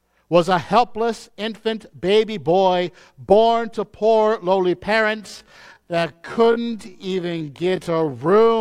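Just after "born to poor lowly", at 5.12 s, the pace suddenly drops. From there to 8.61 s it runs at about 0.55 times normal speed, while the pitch stays where it was. This is a time-stretched section. The slowdown was likely made by software padding the audio out by repeating short slices. That leaves the speech dragging through to "in the".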